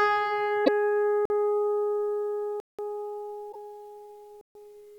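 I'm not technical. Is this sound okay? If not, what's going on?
No. Two kinds of fault can be heard.

The first is damaged data in a compressed stream. Part of the stored file is corrupted, so the playback software can't read that stretch, loses its place and hunts for the next readable piece. You hear a brief chirp or squawk, often with a skip forward, once from 0.62 to 0.69 seconds and again from 3.49 to 3.56 seconds.

The second is a block of digital silence. Most likely the playback software failed to deliver the next chunk of sound in time, so that chunk became complete silence. The sound stops and restarts abruptly, with no fade. There are three: a short hole of about 46 milliseconds at 1.25 seconds, a longer one of about 186 milliseconds from 2.60 to 2.79 seconds, and one of about 139 milliseconds from 4.41 to 4.55 seconds.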